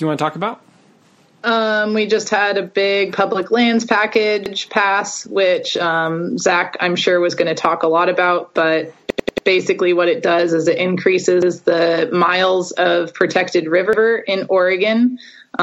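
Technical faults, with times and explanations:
4.46, 9.10–9.47, 11.42 and 13.93 s: repeated buffer. Late audio left the same 93 ms chunk replaying, once each but four times at 9.10 s, so hard joins cause stutters. This fits a 4096-sample buffer.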